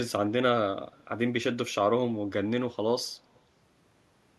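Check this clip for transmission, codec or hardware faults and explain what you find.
There is an echo leak at 3.35 to 3.39 s. A delayed copy of the speech returns about 240 ms after the original, very faint, roughly 40 dB below the speech. The likely cause is a far-end echo canceller that failed to remove loudspeaker sound picked up by its microphone, leaving a brief ghost.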